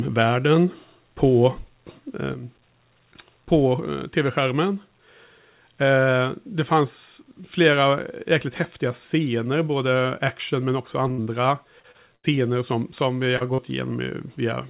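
From 2.34 s to the end, the speech drops abruptly by about 6 dB and stays there. This is likely one channel dropping out before the mono sum. Unlike a fade or a gain change, it is a single sudden step, and anything carried only by that channel disappears with it.

At 11.08 s a short concealed packet loss of about 35 ms leaves a brief smear where the receiver extended the last sound. It runs straight into a burst of packet loss from 11.12 to 11.20 s. Here about 60 ms of audio is missing, and the concealment decays into a held buzz or fading hiss before the speech resumes further on. That longer, fading fill is what separates the burst from the brief smears around it.

Another short concealed loss follows at 11.24 to 11.28 s. From 11.80 to 12.39 s, repeated packet loss produces choppy, robotic sound. There are four gaps, the longest 76 ms, and about a quarter of the stretch is patched. The holes recur faster than the speech can recover between them.

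Two further short concealed losses, at 13.37 to 13.42 s and 13.54 to 13.60 s, each cause a quick wobble of about 40 ms. Throughout, the G.711 A-law call path leaves nothing above 4 kHz, which fits a 64 kbps narrowband call.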